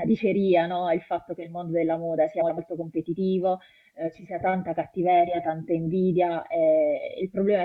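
From 2.41 to 2.59 s the speech breaks into a brief garbled flutter, the result of frames out of order: two adjacent blocks of about 85 ms each were decoded in swapped sequence, so the later block plays before the earlier one. Each block points to a run of four frames. The three joins fall at the start, the midpoint and the end of the stretch, and no time is lost from the clip.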